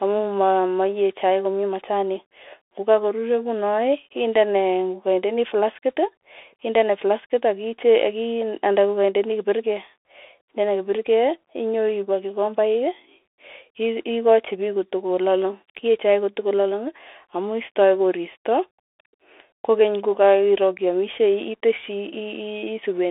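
Throughout the recording, the speech has passed through a Bluetooth CVSD headset codec, which encodes the signal as a single up-or-down bit per sample and adapts its step size as it goes. The band is squeezed to roughly 300 Hz to 3.5 kHz, with nothing above 3.8 kHz, so the voice sounds boxed-in and muffled. The damage is plainly audible: s sounds turn scratchy, loud bright moments smear into distortion, and a granular hiss sits beneath the speech.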